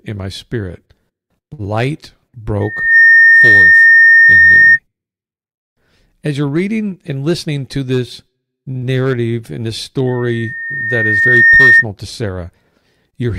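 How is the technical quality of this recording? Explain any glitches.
The recording has four kinds of fault: two feedback squeals, a stall, a speed-up and a short dropout.

At 1.53 to 1.61 s there is a short stall from a late packet. The jitter buffer ran dry, so the last sound was stretched for 53 ms until the packet arrived, with nothing lost. It sounds like a brief held buzz. A spectrogram shows smeared, repeated frames.

From 2.60 to 4.79 s, and again from 10.07 to 11.85 s, there is loudspeaker feedback squeal. The microphone picked up its own loudspeaker, and the loop gain exceeded one at 1.8 kHz. The tone builds over about 0.4 s the first time and more slowly, over roughly 1.5 s, the second. It peaks about 15 dB above the program. On a spectrogram it is a bright horizontal line at 1.8 kHz, and the waveform envelope swells.

From 6.97 to 7.49 s there is a jitter buffer speed-up. To shed excess buffered delay, the receiver cut out pitch-period-sized pieces, around 50 ms in total. 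Playback runs at 108% with unchanged pitch and sounds slightly hurried. Features in the spectrogram look compressed in time.

At 8.77 to 8.84 s there is a burst of packet loss. The receiver concealed it by extending and fading the last sound for 46 ms, then resumed 40 ms further on. It is heard as a fading buzz or hiss and a small jump. The waveform shows a decaying stretch followed by a discontinuity.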